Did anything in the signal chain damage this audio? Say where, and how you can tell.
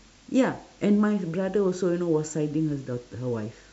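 No, nothing in the signal chain damaged this audio.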